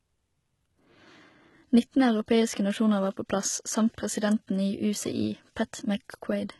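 From start to finish, the speech carries heavy codec damage, likely HE-AAC compression at a very low bitrate, consistent with roughly 16 kbps. Only the lower band is coded properly; the treble is rebuilt by copying lower bands upward, so it sounds unnatural, and s sounds turn gritty and metallic. A spectrogram shows a hard ceiling with nothing above 11.8 kHz and smeared, repeated-looking texture in the upper band, its harmonics misaligned with those below.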